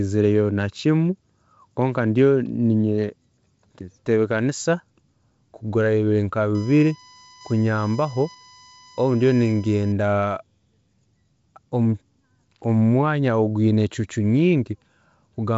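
A short speech recording with one clear problem: right after "kugurayo nka", at 6.55 s, a steady 1 kHz tone comes in and sits there until 9.92 s, roughly 25 dB below the speech. That's USB whine. The bus pulls current in 1 ms frames, and that ripple gets into the audio through a shared power or ground line, so you hear a fixed 1 kHz pitch. The band-limited top end, with nothing above about 7.7 kHz, comes from the G.722 wideband coding and fits a 56 kbit/s stream.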